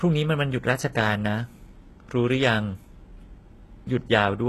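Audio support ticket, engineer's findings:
Speech, throughout: gritty, lispy sibilants, treble extended but unnatural, nothing above 12.4 kHz. Likely HE-AAC compression, low bitrate; upper band rebuilt by spectral band replication, harmonics misaligned at crossover.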